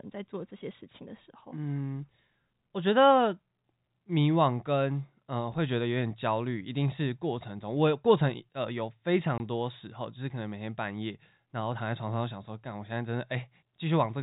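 At 9.38 s there's a short dropout, packet loss filled with silence. About 20 ms of speech, the length of a single packet, just vanishes, and the receiver plays nothing in its place until 9.40 s, so you get a hard-edged gap.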